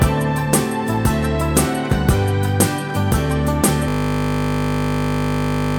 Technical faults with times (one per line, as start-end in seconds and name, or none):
3.88-5.79 system hang loop